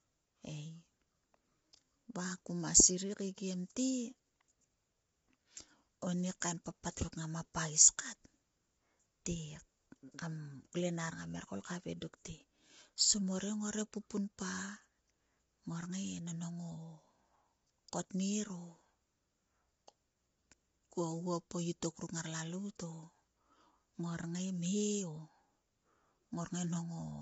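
Low-delay AAC compression runs throughout the speech, likely from AAC-ELD at a bitrate that fits about 24 kbps. Its short frames blur pitch harmonics, so the speech turns plainly rough and grainy with noise between harmonics, and nothing is heard above 7.7 kHz.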